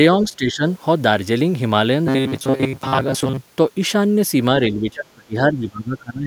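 Speech, with two stretches of what sounds like speech suppressed in double talk, from 0.24 to 0.62 s and from 4.67 s to the end, where the level falls by about 15 and then about 20 dB. This is likely an echo canceller ducking the near talker, and unlike a dropout, the level sinks rather than vanishing. From 2.07 to 3.38 s there is robotic sound from repeated short buffers: a rigid 133 Hz buzz, likely caused by re-played segments of about 7.5 ms standing in for most of the real audio. Unlike codec warble, the pitch stays fixed while the speech still roughly follows through.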